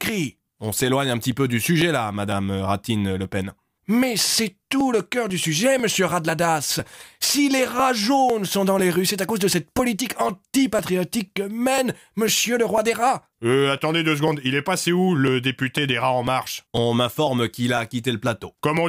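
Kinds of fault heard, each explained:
Periodic USB or driver dropouts: something blocks the audio path about every 0.5 s from 0.32 s to 18.77 s, and each time around a millisecond of audio is skipped outright. The splices come through as regular ticks, roughly forty in all, audible only where sound is present.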